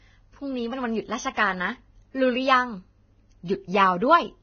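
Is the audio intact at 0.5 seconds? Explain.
No. At 0.5 seconds, as throughout the clip, the speech has heavy damage from what is likely Vorbis compression at a very low rate, which fits a bitrate around 18 kbps. The encoder drops everything above 6.5 kHz and quantises the remaining treble so coarsely that fine detail turns into noise of similar energy. The speech sounds dull, hissy and grainy, with roughened tones and smeared consonant onsets.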